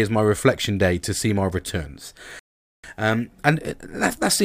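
At 2.39 s, right after "to see my returns", a rebuffering stall halts playback for 0.44 s of silence; the speech then resumes exactly where it stopped, nothing lost.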